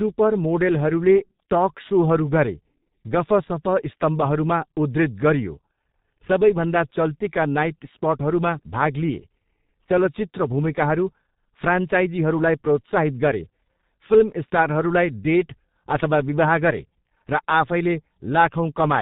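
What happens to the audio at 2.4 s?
At 2.4 s the sound is under G.723.1 codec damage, present throughout the clip. Heavy coding in 30 ms frames, which fits a rate near 6 kbit/s, leaves it muffled and hoarse with smeared consonants. A spectrogram shows nothing above 4 kHz and blocky, frame-stepped textures.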